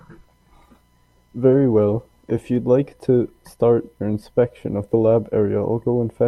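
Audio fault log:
No faults heard anywhere in this speech recording.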